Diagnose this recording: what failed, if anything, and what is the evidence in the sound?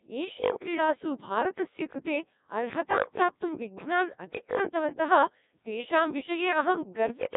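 The codec stage failed: the Codec 2 vocoder heavily damaged this speech throughout, leaving a buzzy, robotic sound that fits a 1.6 kbit/s mode. It resynthesises sine waves from pitch and envelope, so a spectrogram shows rigid harmonic stacks with nothing above 3.8 kHz.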